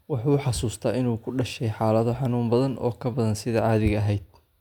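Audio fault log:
No faults are heard in this speech recording. Nothing in it calls for an entry in this log.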